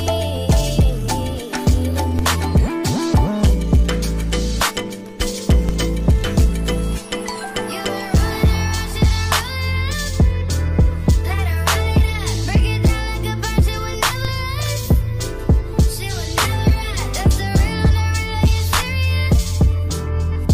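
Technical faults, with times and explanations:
2.19 s, 5.69 s and 14.25 s: DC step. At each moment the waveform's zero line jumps by about -10 dBFS (about -11 dBFS at 14.25 s), and the offset then drains away through a 20 Hz high-pass response. The sudden shift is heard as a low thump or click, and the sound carries on unchanged around it. Unlike a dropout or sample glitch, nothing is missing or repeated; only the baseline moves.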